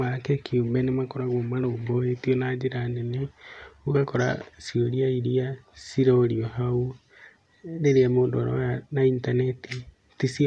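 No technical faults can be heard at any point in the speech.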